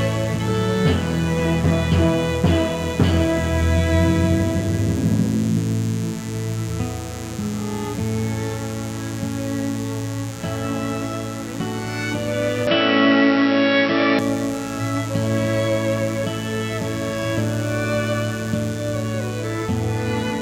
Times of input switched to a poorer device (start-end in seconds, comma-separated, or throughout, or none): 12.67-14.19